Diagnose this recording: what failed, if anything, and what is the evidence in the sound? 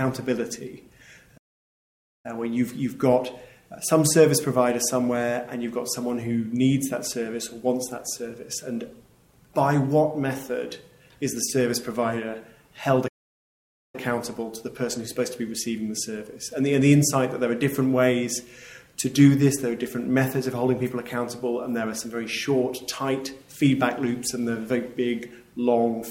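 The failure is at the playback stage: two playback stalls. The sound halts in mid-flow and falls fully silent from 1.37 to 2.26 s (about 0.87 s), then again from 13.08 to 13.95 s (about 0.86 s), before carrying on. The likely cause is the player running short of data, or its output thread being blocked, until it recovered. Unlike a network dropout or codec glitch, each gap is a long, clean silence rather than a brief click, warble or smeared patch.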